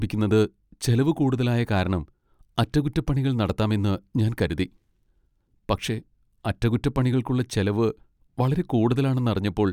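No technical faults can be heard anywhere in the recording.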